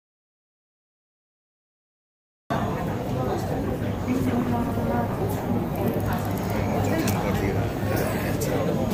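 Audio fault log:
0.00–2.50 s, audio dropout to silence: already under way when the clip opens, with silence and no room tone, likely from input loss while recording continued.
3.46–7.09 s, call bitrate drop: encoding falls from 128 to 16 kbps and holds at its lowest for about 1.3 s, so coarse coding and lost high frequencies leave the sound rough and muffled.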